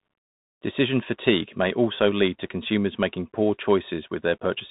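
Throughout, the speech passes through a Bluetooth CVSD headset codec: nothing above 3.8 kHz, scratchy s sounds and granular hiss from one-bit slope tracking, unlike a clean band-limit, fitting 64 kbps CVSD.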